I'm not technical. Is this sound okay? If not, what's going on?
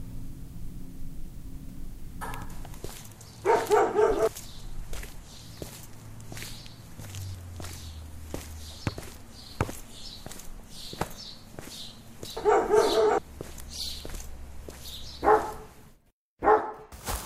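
No. At 12.25 s about a tenth of a second of sound skips, which is audio missing between chunks, likely lost while the recorder switched between five-second pieces.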